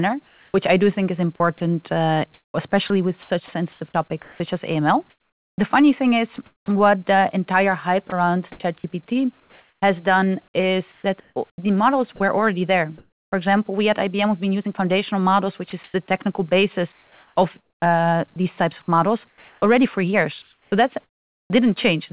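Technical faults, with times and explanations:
0.28–6.68 s, sound chopped by the voice detector: Speech drops out in gaps, about 1.6 s in total. Synthetic comfort noise fills them. A sender-side voice detector switching on and off is the likely cause.
8.1–13.32 s, sound chopped by the voice detector: The same choppy pattern returns, about 1.3 s replaced. Quiet word edges vanish into steady generated hiss. Voice detector gating is the likely cause.
15.7–21.5 s, sound chopped by the voice detector: The run with the most sound replaced, with about 1.9 s swapped for comfort noise within the call's 4 kHz band. Likely caused by the voice detector.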